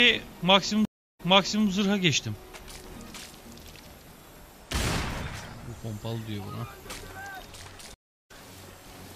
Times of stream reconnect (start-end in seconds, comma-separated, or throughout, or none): 0.85-1.67, 7.94-8.31